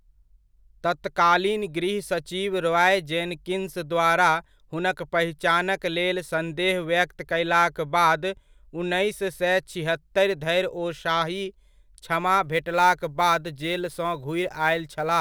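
From about 12.44 s right through to the end at 15.21 s, the speech picks up sample clock jitter. The converter's clock is wobbling by a few microseconds, so each sample lands a touch early or late, and the resulting error scales with how steeply the waveform is moving. You hear it as a grainy hiss riding on the louder and brighter parts of the speech, sitting roughly 30 dB under the signal, and dropping away in the pauses.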